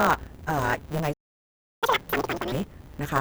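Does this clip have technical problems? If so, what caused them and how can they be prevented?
Yes. A block size mismatch (truncated) runs through the whole clip. A buzz sits at 150 Hz. The speech runs 1.6 times fast at about normal pitch. One stage writes longer blocks than the next reads, which fits 512-sample blocks, so each block's tail is dropped. Matching the block sizes between the two stages prevents it.

A playback stall silences the speech from 1.13 to 1.83 s. The likely cause is the player running out of data or its thread being blocked. Larger buffers and a high-priority audio thread prevent it.

Catch-up at higher speed follows from 1.83 to 2.52 s. The backlog plays twice as fast. Pitch jumps by nearly an octave. The player resamples to win back the lost time. Dropping the backlog, or time-stretching without a pitch shift, prevents it.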